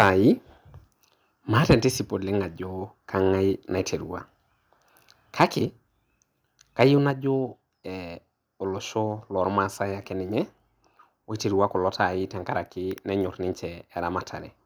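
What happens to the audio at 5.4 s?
At 5.40 to 5.44 s the speech turns harsh and crackly for a brief instant, a gritty edge on a loud syllable. The likely cause is microphone overload: input gain set high enough that peaks ran about 4 dB past the converter's ceiling, with a few percent of samples flattened. On a waveform the tops appear squared off; a spectrogram shows a short vertical smear of broadband energy.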